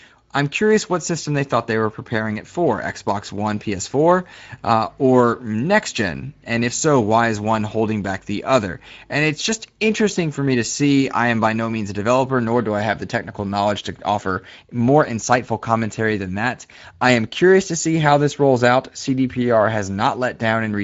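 Throughout the speech, the Speex codec had too few bits for its excitation, which fits a bitrate near 17 kbps. The speech sounds noisy and hoarse, nothing remains above 7.7 kHz, and the band above 4 kHz is only a shaped, noise-like fill.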